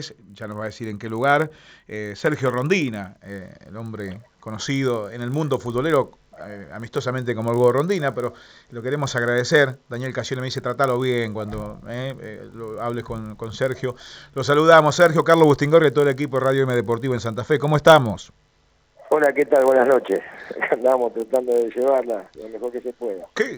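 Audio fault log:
throughout, resampler restarted on every block: a steady 50 Hz buzz rides under the sound wherever there is signal and vanishes in the gaps, like a fine rasp locked to a fixed rhythm. The converter was restarted on each 20 ms block, so at every block edge it filtered against missing or wrong neighbouring samples, leaving a small error fifty times a second. The upsampling behind it points to a 16 kHz to 48 kHz conversion.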